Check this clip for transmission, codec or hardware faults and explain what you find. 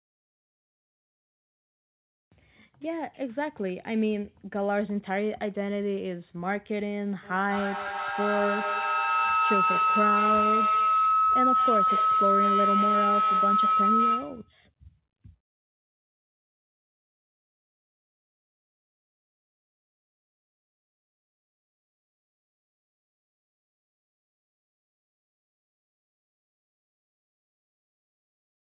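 One fault stands out: a feedback howl from 7.23 s to 14.58 s, with the speech confined below about 4 kHz, consistent with narrowband telephone-grade coding. During the howl, sound from one device's loudspeaker re-enters a nearby microphone on the same call and gains level on each trip, repeating roughly every 200 ms and narrowing into a ringing tone around 1.5 kHz that peaks about 4 dB above the speech. Unlike ordinary echo, whose repeats fade, these grow until the loop breaks.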